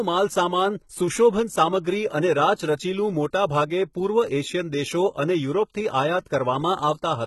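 Speech, and the whole thing carries heavy HE-AAC compression damage from start to finish. The top end sounds bright enough at first, but it's synthetic: the sibilants come out gritty and a bit lispy, with a metallic sheen, because the treble is likely being rebuilt by spectral band replication rather than coded, so its harmonics don't line up with the real ones below. Nothing survives above about 11.8 kHz, and the grit points to a very low bitrate, around 16 kbps.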